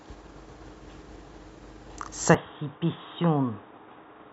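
At 2.34 s the speech suddenly goes dull and boxy, with nothing left above 3.8 kHz, drops a bit in level and gains faint new background noise, with no gap at the change. That's likely an input switched to a poorer device, holding through the end.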